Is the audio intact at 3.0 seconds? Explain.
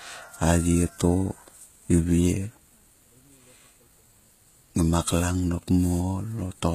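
No. At 3.0 s, as throughout the speech, the treble is likely rebuilt by HE-AAC compression: a low-bitrate band copied upward from lower frequencies. S sounds turn gritty and metallic, not merely dull as with a plain low-pass, and nothing remains above 14.9 kHz.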